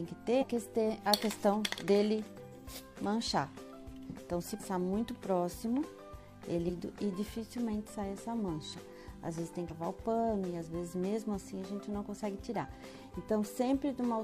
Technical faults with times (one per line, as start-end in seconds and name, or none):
0.37-0.44 damaged data in a compressed stream
4.55-4.62 damaged data in a compressed stream
6.64-6.70 damaged data in a compressed stream
9.66-9.72 damaged data in a compressed stream